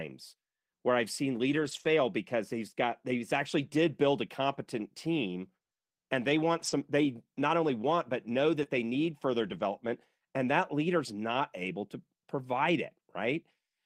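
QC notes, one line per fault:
1.51–9.61 s, lost packet rebuilt from error correction: at 1.51–1.85 s, 3.65 s (after "he's got he's actually", before "build a competent team"), 6.59–6.73 s, 8.65 s (after "only want but know", before "they need further") and 9.43–9.61 s (after "they need further"), the sound never drops out but goes rough and noisy. Lost packets were replayed from the low-bitrate backup copy carried in the following packet, so those stretches sound coarser. The longest rebuilt stretch is about 180 ms at 1.51 s.
3.69–8.67 s, short concealed packet loss: at 3.69–3.73 s and 8.63–8.67 s, roughly 20 ms never arrived in time. The decoder filled each gap by extending the preceding sound and blending back in, which comes across as a brief smear or wobble right beside the rebuilt packets.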